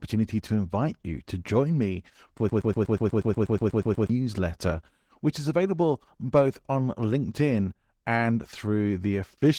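A speech clip whose voice sounds hoarse, slightly robotic and grainy throughout, the plainly audible damage of Opus voice compression in hybrid mode, which fits about 16 kbps. Right after "to join me for", from 2.49 to 4.10 s, a 121 ms fragment repeats back to back 13 times, a broken-record loop likely caused by a stalled stream resending its last fragment.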